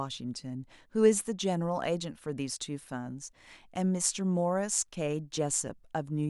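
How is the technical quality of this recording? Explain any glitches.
No audible glitches or faults.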